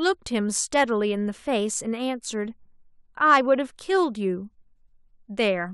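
No technical faults can be heard anywhere in this recording.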